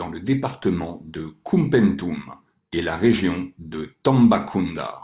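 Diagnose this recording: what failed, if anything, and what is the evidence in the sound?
Aliasing in sample-rate conversion throughout: sibilants sound gritty and metallic, energy runs hard to 4 kHz, fitting an unfiltered drop to 8 kHz. Plain band-limiting would sound dull, not false.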